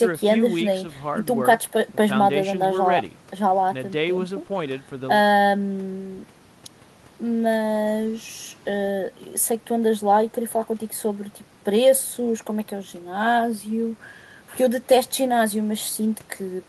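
Nothing goes wrong anywhere in this speech recording, so there's no fault to point to at any moment along the way.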